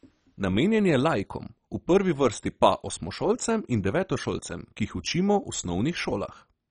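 Throughout the speech, the sound is dull and gurgling, with a granular edge. Nothing remains above 10.3 kHz. Heavy MP2 compression is the likely cause, at a rate that fits 32 kbps. Starved of bits, upper sub-bands drop out and flicker, and the remaining bands are coarsely quantised.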